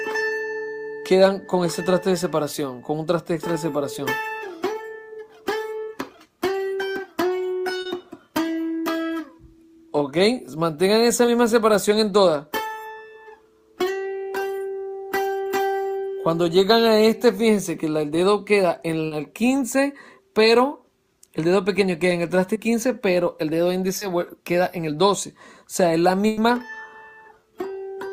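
Short concealed packet loss first appears at 7.81 to 7.87 s, where about 40 ms of audio never arrived in time. The receiver covered the hole by extending the preceding sound, then blended back into the real signal. It comes through as a quick smear or wobble. The same happens at 11.25 s, again at 19.07 to 19.13 s with a 40 ms gap, then at 22.53 s, 23.99 s and 27.41 s. Each of those single-time gaps spans about 20 ms.

A burst of packet loss lands at 26.27 to 26.39 s. Here 100 ms went missing in one run, longer than the other gaps. The receiver kept the last sound going and let it decay across the hole, without dropping to silence. It is heard as a held buzz or fading hiss. The audio then picks up further along, and that tenth of a second is simply gone.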